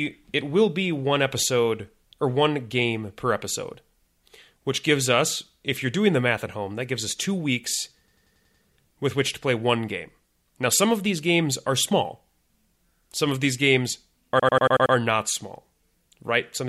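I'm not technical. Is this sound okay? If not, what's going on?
No. A system hang loop occurs twice, at 8.08–8.64 s after "gives us two weeks" and 14.40–14.95 s after "of these games are". The computer stalled, replaying one 93 ms snippet six times, a stutter about 11 times a second. Unlike a dropout, nothing goes silent.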